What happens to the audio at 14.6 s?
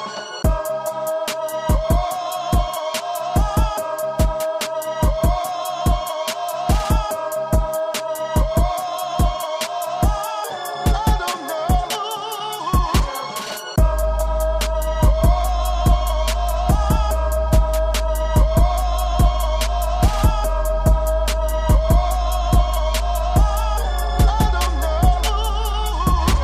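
Nothing goes wrong at 14.6 s; the audio plays through that moment intact, with no dropout, click, glitch or other fault.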